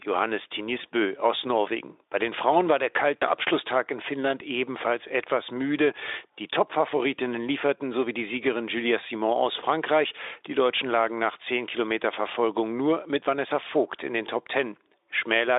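A speech clip with two short dropouts at 0.81 to 0.85 s and 3.18 to 3.24 s, where the sound smears into a buzzy tone or a coloured noise that fades. This is VoIP packet loss concealed by the speech codec. The decoder extrapolated over what sounds like one, then two, lost 20 ms frames.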